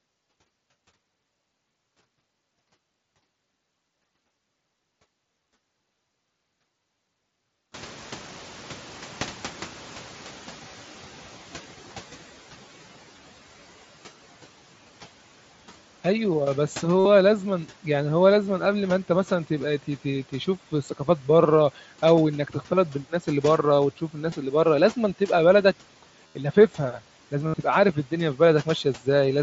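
Around 7.5 s the room noise jumps, and the noise suppressor catches up slowly: from 7.74 to 12.31 s the noise comes through strong, then sinks by about 8 dB. Later there's concealed Bluetooth headset packet loss, with the receiver repeating recent waveform to cover gaps. The 15 ms blips at 22.16 and 24.31 s are brief. The longer runs at 17.00–17.05 s (60 ms), 26.27–26.35 s (82.5 ms) and 27.48–27.54 s (60 ms) come out as a buzzy held tone with a slight warble where the audio resumes.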